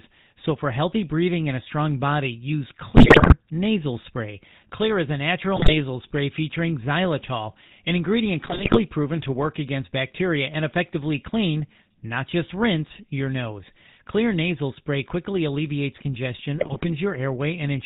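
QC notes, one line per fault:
Throughout: GSM full-rate codec. The speech has a buzzy, gravelly roughness that is plainly audible across the clip. Nothing comes through above 4 kHz, so sibilants sound dull and clipped. The roughness comes from the codec rebuilding the voice through a vocal-tract filter driven by a sparse, regularly spaced pulse excitation, with two of every three excitation samples thrown away. The character fits the 13 kbit/s full-rate coder.
2.96–3.34 s, 5.56–5.75 s, 8.42–8.79 s, 16.58–16.87 s: GSM bit errors. In each stretch the speech breaks into squawks, pops and gargling. The longest, roughest burst is at 2.96 s. The one at 5.56 s is short. Corrupted bits reach the decoder and scramble the filter, pitch or gain values for individual frames. That bends the spectrum or throws the level up abruptly, giving these sudden distorted outbursts.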